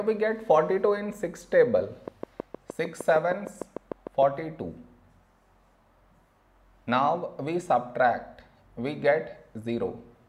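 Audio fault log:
2.08–4.23 s: train of clicks, about fifteen evenly spaced ticks at 6.5 per second, peaking a little above the audio. A regular pulse source such as nearby equipment interference is likely.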